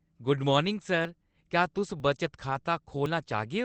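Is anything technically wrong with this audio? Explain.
Yes, there are two kinds of fault. Jumps forward in the speech at 1.05, 2.0 and 3.06 s are likely a dropped buffer (overrun). Samples were overwritten before being read, so roughly 30, 10 and 30 ms vanish and the edges join directly. From 2.49 to 2.55 s, a lost packet rebuilt from error correction sounds rougher and noisier. This fits two packets replaced by Opus low-bitrate copies covering 40 ms, with no gap. The 8 kHz band limit comes from the call codec.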